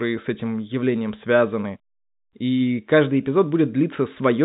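No faults to report: the speech is carried over ordinary G.711 telephone coding, with nothing heard above about 3.8 kHz, as expected of that narrowband path.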